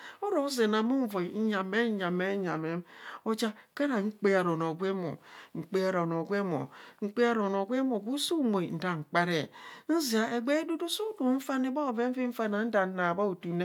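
Speech recording with no technical fault to report. There are no events to time and no causes to give.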